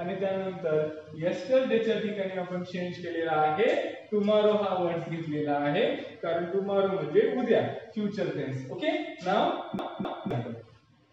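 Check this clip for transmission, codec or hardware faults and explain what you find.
One fault is present: a CD stuck on one turn, from 9.79 to 10.31 s. A scratch sends the laser back one track each revolution, so a 260 ms slice of sound plays twice, with a brief mute at each jump, giving a quick, regular stutter.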